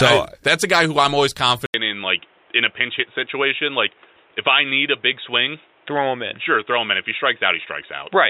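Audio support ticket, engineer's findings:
Dull, boxy speech from 1.66 s on, after an 80 ms dropout; band stops at 3.8 kHz, faint new noise floor. Likely input switched to a poorer device.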